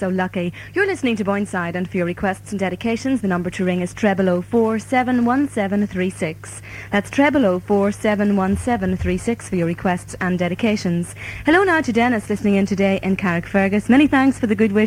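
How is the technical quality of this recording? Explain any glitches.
Nothing stood out as a glitch or technical problem on listening.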